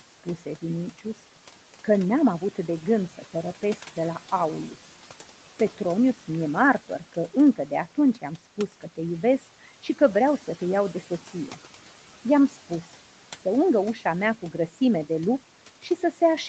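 Noise suppressor artifacts run through the whole clip. The suppressor pulls down bands it judges to be steady noise, cutting about 11 dB. The room noise dips in pauses and returns under the speech.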